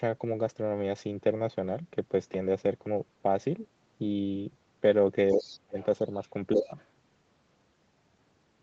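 From 5.31 to 5.56 s a faint second voice slips in underneath, roughly 20 dB below the main talker, and a short scrap returns at 5.8 s, even quieter. This is the other side's voice leaking through. The likely cause is that the far end, playing on the talker's loudspeaker, reached the microphone and was not fully removed by the echo canceller. It overlaps a sharp collapse in the main speech from 5.33 to 5.79 s, where the talker drops by around 35 dB and breaks up across most of that half-second. This is speech suppressed in double talk. Both sides were likely talking at once, and the canceller, unable to separate the near voice from the echo, pulled everything down.

The pattern repeats more gently later. The leaked voice resurfaces from 6.52 to 6.86 s at about the same low level. Within it, from 6.55 to 6.76 s, the talker dips by about 10 dB, a shallower double-talk suppression than the first. 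Throughout, the audio tops out at 8 kHz, consistent with the call's Opus coding.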